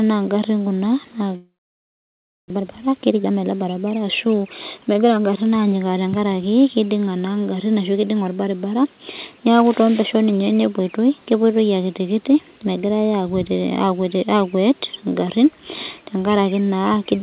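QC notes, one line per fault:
1.36–2.52 s, long network dropout: Audio likely stopped arriving just after "ingarin kuna", and 0.6 s was never played. The receiver bridged about 1.14 s, stretching the last sound into a brief fading buzz, then held about a second of near silence before speech resumed further on.
2.55–4.79 s, jitter buffer speed-up: After the gap, about half a second of surplus audio sat queued, so the receiver repeatedly cut short pitch-period pieces to shrink the delay. Speech runs at 122% speed with unchanged pitch and sounds hurried, within the 4 kHz band of the call codec.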